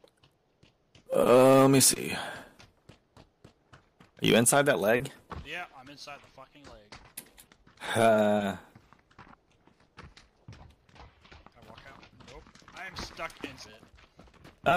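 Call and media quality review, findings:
Short blip at 13.63–13.65 s, about 20 ms, then the audio picks back up. Damaged data in the compressed stream. Probable component: decoder input. Bad bytes garble that frame, so the decoder loses sync briefly and latches onto the next valid frame header. Single event, worth checking the transport or file integrity.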